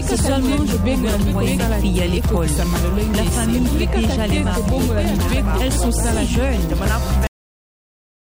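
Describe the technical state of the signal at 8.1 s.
At 8.1 s the signal sits inside a cut-off end, which runs from 7.27 s to the end of the clip. The final buffers were never written out, so the sound is chopped mid-event at 7.27 s and falls straight to digital silence with no natural decay or tail. On a waveform the trace collapses abruptly to a flat line; on a spectrogram every frequency band goes black at once along a sharp vertical edge.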